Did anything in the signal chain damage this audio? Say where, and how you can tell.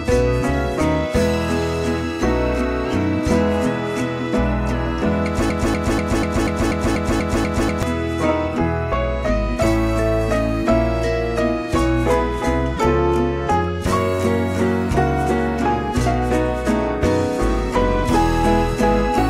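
Yes. From 5.50 to 7.83 s a broken-record loop repeats one 0.24 s fragment ten times back to back, and the intended audio there is lost. The likely cause is a stalled player or stream buffer resending its last block. A spectrogram shows identical tiled slices.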